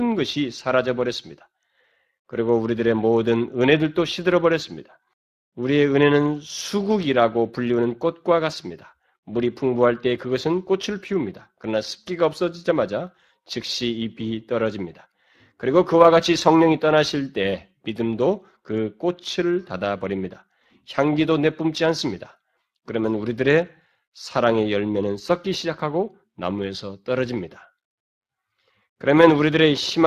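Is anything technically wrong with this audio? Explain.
Yes. The speech runs through the Speex codec for the whole clip. This CELP coder spends few bits on the excitation. The damage is plainly audible as a noisy, hoarse edge, which fits a rate near 22 kbps. Nothing sounds above 15.3 kHz.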